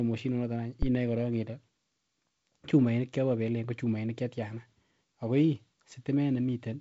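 Phantom power or another supply was switched on or off on a live input in this speech recording, and the step passed through the coupling capacitors to produce a phantom power thump from 0.83 to 0.90 s. It is a deep thud that dies away within about 16 ms. The signal also passes through G.722 wideband telephone coding, so nothing is heard above 7.7 kHz and the upper band carries a light hiss.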